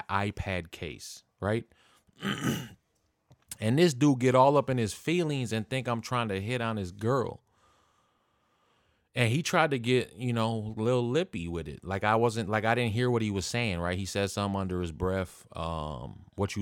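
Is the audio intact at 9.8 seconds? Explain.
Yes, at 9.8 seconds the speech runs through cleanly, with no dropout, click, distortion or other fault at that moment.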